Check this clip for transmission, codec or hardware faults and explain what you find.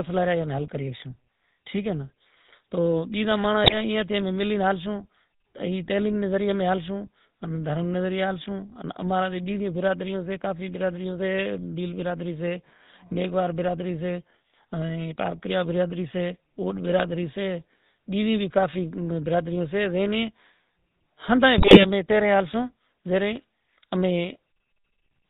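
The clip has two faults: GSM full-rate coding throughout, and two short bursts of GSM bit errors.

The GSM full-rate codec colours the whole clip, and the damage is plainly audible. The coder models the vocal tract as a filter and drives it with a sparse train of regularly spaced pulses. Only every third excitation sample survives. Nothing above 4 kHz gets through. The speech sounds buzzy and gravelly, with a dull, band-limited top. This fits a 13 kbit/s full-rate stream.

GSM bit errors break the speech at 3.64 to 3.75 s and again at 21.58 to 21.85 s. The second burst is longer. Corrupted bits reached the decoder and scrambled its filter, pitch and gain values for 4 and then 10 frames. The spectrum warps and the level jumps. Each burst sounds like a squawk and gargling pop. The error rate points to a few percent of bits flipped.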